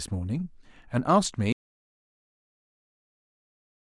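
At 1.53 s the speech cuts off abruptly in an audio dropout to silence that runs to the end, most likely from lost input while recording continued. Unlike a fade or noise gate, the drop is instant and leaves no room tone.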